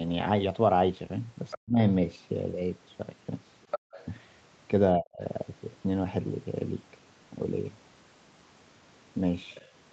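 At 1.50 to 1.58 s and again at 3.63 to 4.06 s, a second voice sits faintly under the speech: the other side's voice leaking through, likely from loudspeaker echo the canceller missed. On a spectrogram it shows as a fainter, unrelated harmonic pattern, around 15 and 10 dB below the talker. Its last brief trace comes at 9.54 to 9.67 s, much quieter still.

Right after the first leak, from 1.58 to 1.79 s, and again from 4.98 to 5.21 s, the talker's speech is suppressed in double talk, likely because the canceller turned everything down while both sides spoke. The voice dips sharply, by up to roughly 40 dB, for about a fifth of a second each time. The waveform narrows abruptly, and the spectrogram thins and fades.

Inside the second leak, from 3.79 to 3.92 s, the background is gated by the echo canceller. The room sound drops by about 40 dB for roughly 150 ms, then returns. The spectrogram shows a short dark gap in the low-level floor between speech energy, which stops at 8 kHz throughout.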